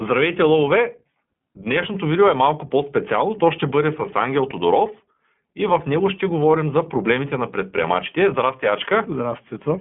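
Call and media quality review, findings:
iLBC codec, whole clip. Narrowband, roughish synthetic speech, plainly audible codec damage. Spectrogram: nothing above 3.7 kHz, energy mostly 200 Hz to 3.4 kHz. Independent 20 ms frame coding, which fits the 15.2 kbps mode.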